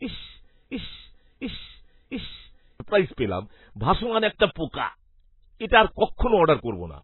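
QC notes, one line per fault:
Throughout: MP3 compression. Heavy watery, swirly damage with nothing above 4 kHz, likely from MP3 encoding at a bitrate around 16 kbps. Weak frequency lines drop in and out between frames.
0.00–2.80 s: broken-record loop. A 0.7 s fragment, already under way at the start, repeats three times back to back before "পেলাম ভাসমান". It likely comes from a stalled stream resending its last piece, so the audio meant for that span is lost.
4.38–4.41 s and 6.17–6.19 s: pre-echo. Short hiss of 31 ms and 25 ms arrives before sharp attacks, the first just after "পেলাম ভাসমান". Block-wide quantisation noise fills the quiet moment before each attack, so the attacks sound smeared.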